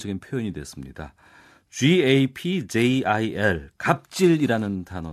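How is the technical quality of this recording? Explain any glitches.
No glitches turn up anywhere in this recording, so there's nothing to explain.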